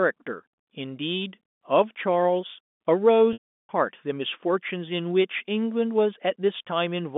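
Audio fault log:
3.33–3.69 s, packet loss with pitch repetition: The sound cuts out for 360 ms. At the start of the gap, the receiver repeats the last pitch period, which gives a brief buzzy hold. That hold fades away over about 50 ms. The rest of the gap is silence, because the loss is too long to bridge. The sound then returns with a short cross-fade. The length fits about a dozen 30 ms packets. The narrow telephone band stays audible throughout.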